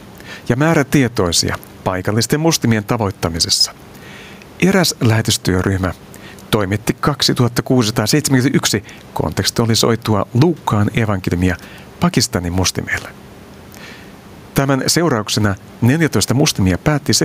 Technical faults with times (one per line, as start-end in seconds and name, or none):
0.00-17.24 gain pumping